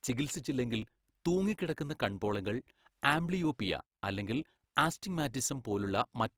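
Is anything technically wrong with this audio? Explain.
Yes, two faults.

Throughout, the speech has a grainy, rough texture with a noisy tonal character. This is likely Opus compression in its CELT music mode: band energies are preserved but filled with folded or noise content, which fits a bitrate around 24 kbps while bandwidth stays full.

At 0.82 s, just before "തൂങ്ങിക്കിടക്കുന്ന കൺപോളകൾ", there is a small skip where the audio jumps forward with no silence. This is likely audio missing between chunks. A sliver of a few milliseconds was lost at a chunk boundary, consistent with processing in 2-second blocks.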